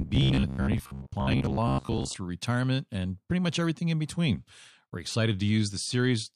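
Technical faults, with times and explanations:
0.02–2.17 s: robotic sound from repeated short buffers; speech becomes a rigid 66.7 Hz buzz, likely a 15 ms block repeated while about half the audio is skipped.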